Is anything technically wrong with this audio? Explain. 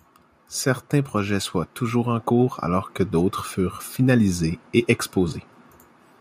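Yes. From 0.9 to 3.42 s there's automatic gain rising: the AGC decided the input was too quiet and ramped up about 4 dB, so the voice and background swell together.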